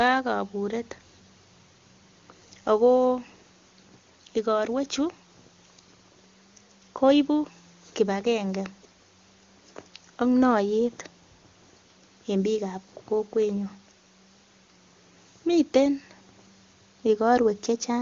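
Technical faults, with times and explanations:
No technical faults, with times and explanations, to report: the speech comes through an AMR wideband (HD Voice) codec at a high rate, with content reaching only to about 7.1 kHz and any coding damage faint at most.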